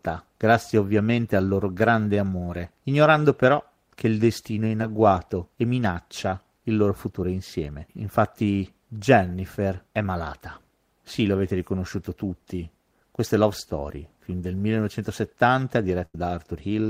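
At 4.81 s, between "il destino è in" and "agguato e minaccia il", there is a short concealed packet loss. About 10 ms of speech failed to arrive in time, and the decoder extended the preceding sound for roughly 9 ms before rejoining the real signal. It is heard as a brief smear or wobble.

From 16.05 to 16.15 s, a burst of packet loss removes about 90 ms of speech. The receiver stretched the last sound over roughly 85 ms while lowering its level, giving a held buzz or fading hiss. Speech then resumes with that stretch missing.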